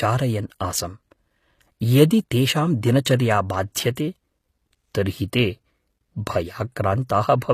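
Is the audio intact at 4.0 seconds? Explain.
No. At about 3.95 s there is pre-echo: a short smear of hiss, about 17 ms long, that arrives just ahead of a sharp onset. The encoder spreads its quantisation noise evenly across a transform block, so noise sized for the loud attack also fills the quiet instant before it, which softens the attack. A click or dropout is a separate event, whereas this is a noisy halo that comes before the transient and is tied to it.

The same stretch carries compression damage that is plainly audible and present throughout the clip. The treble sounds rebuilt rather than captured, and sibilants come out gritty and metallic. There is nothing above about 14.9 kHz. This is likely HE-AAC compression, consistent with a stream of around 24 kbps, where spectral band replication copies lower bands upward so that the harmonics no longer line up. A plain low-pass filter would instead leave the top end dull, not falsely bright.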